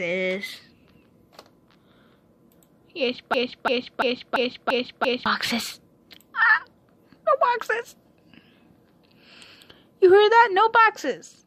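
At 3.34 s a broken-record loop begins and runs until 5.26 s. A fragment of about 0.34 s plays again and again, back to back. It repeats six times with no change. The effect is a stuck, stuttering cycle in place of moving sound. Whatever should have played in those two seconds is gone. The likely cause is a stall in the player, encoder or stream, which kept resending the last piece it held.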